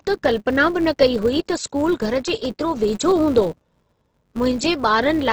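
Speech throughout, and it comes across grainy and rough with nothing above about 8 kHz, which sounds like heavy Opus compression in its music mode, likely at a low rate around 12 kbps. There's also a steady buzz at about 188 Hz that rises and falls with the talker, the signature of a filter restarted on every block, which fits a 256-sample block. From 2.26 to 2.45 s you get a short burst of processor overload crackle, a handful of tiny silent gaps from missed buffers that each sound only a millisecond or two long.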